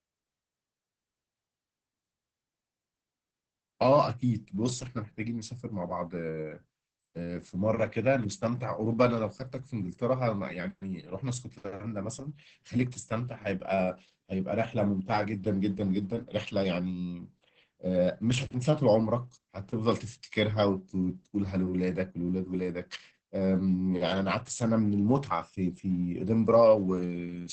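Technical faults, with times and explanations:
Throughout: Opus voice compression. Heavy damage at about 10 kbps leaves the speech muffled, hoarse and robotic. A wideband SILK coder crudely approximates the excitation.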